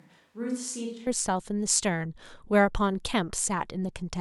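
Speech opens sounding roomy and hollow, thin in the low end and about 10 dB quieter, with room noise audible roughly 40 dB below the voice. This is already under way as the clip begins and ends abruptly at 1.07 s, when the voice snaps to a close, fuller sound. The cause is likely a switch to a distant microphone: the close mic's feed was missing for that first second, so a farther pickup captured more room reflection and less direct bass.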